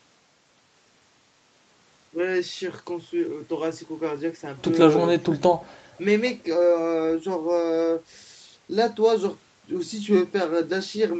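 No technical faults are audible.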